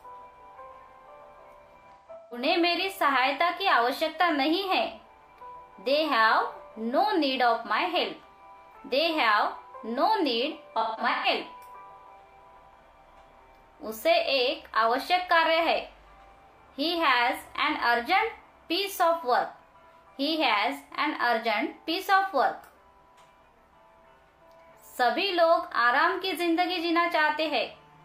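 At 1.8–2.42 s and 10.8–11.26 s, AAC frame loss with concealment refills the gaps from the last good spectrum, so the sound is smeared and phasey, with blurred, flattened spectrogram patches.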